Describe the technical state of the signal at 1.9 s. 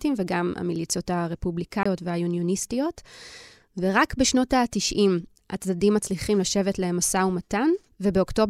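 Just before 1.9 s, the speech drops out between 1.83 and 1.86 s: a Bluetooth stall, with the signal falling to silence for about 23 ms and then resuming. The likely cause is radio interference delaying packets, so the headphones' buffer ran empty and playback paused until the resent data arrived. It sounds like a brief gap. On a waveform it shows as a flat line, and on a spectrogram as a thin vertical blank band across all frequencies.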